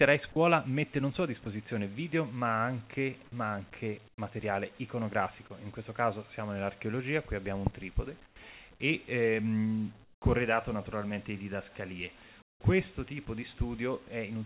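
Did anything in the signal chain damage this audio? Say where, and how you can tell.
Yes. At the call-processing stage, the sound is briefly cut and replaced by steady noise at 0.32–0.36 s and 1.44–1.46 s. This is sound dropped by the voice detector, which likely misjudged those short stretches as background, stopped sending, and let the receiver fill in comfort noise.

The same stage causes the second fault, comfort noise in place of the background, at 4.08–4.18 s, 8.26–8.36 s, 10.04–10.22 s and 12.42–12.60 s. The real background, sitting about 27–29 dB below the loud parts, turns into flat, featureless hiss about 10–16 dB quieter. Discontinuous transmission likely paused sending and the receiver synthesised filler noise. The narrowband call path, with nothing above 4 kHz, is working normally, adding only its usual coding noise.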